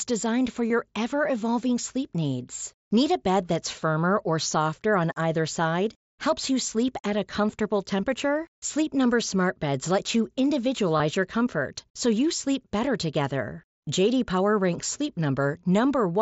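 Packets between the headset and the phone dropped out, and the receiver filled each gap by repeating the best-matching stretch of the preceding waveform. This concealed Bluetooth headset packet loss occurs twice, each lasting about 22 ms, which fits a run of roughly three packets. From 0.68 to 0.70 s, just after "designed for" and before "ever evolving sleep needs," and from 10.98 to 11.00 s, just before "your comfort so you," the speech briefly turns into a held, buzzy tone at full level, with a slight warble as the real signal resumes over the mSBC wideband link.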